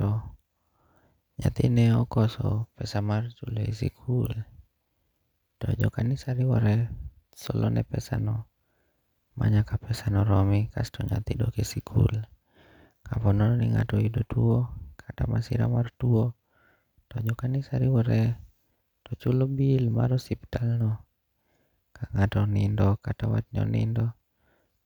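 A speech recording, and there's nothing technically wrong to point to anywhere in it.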